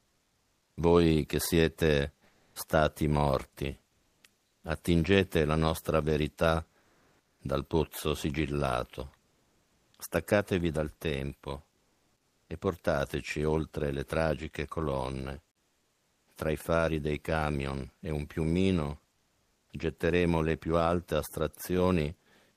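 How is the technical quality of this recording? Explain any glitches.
The recording has one recurring glitch: comfort noise in place of the background, in eight pauses at 0 to 0.77 s, 2.25 to 2.55 s, 3.89 to 4.63 s, 6.79 to 7.39 s, 9.23 to 9.93 s, 11.75 to 12.49 s, 15.53 to 16.27 s and 19.15 to 19.69 s. The likely cause is discontinuous transmission: the sender goes quiet between phrases, and the receiver fills the gap with synthetic noise. The natural background turns into a flat, featureless hiss, about 4 dB quieter to about 2 dB louder than before, until speech resumes.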